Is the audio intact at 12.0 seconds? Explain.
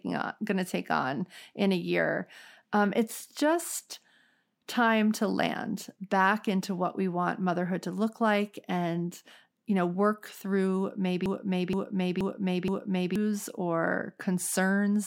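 No. From 11.26 to 13.16 s the speech is caught in a broken-record loop: a fragment about 0.47 s long plays four times in a row, each pass identical, so the sound stutters mechanically instead of moving forward. The likely cause is a player, encoder or stream that stalled and kept resending the last buffered piece it held. Whatever speech belonged in those two seconds is missing rather than delayed.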